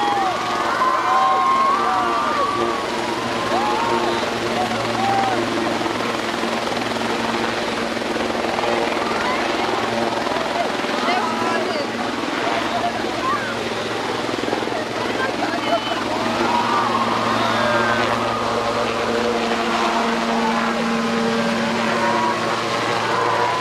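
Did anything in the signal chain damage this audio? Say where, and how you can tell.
No, nothing along the way seems to have harmed this audio; I can't hear any stage leaving a mark on it.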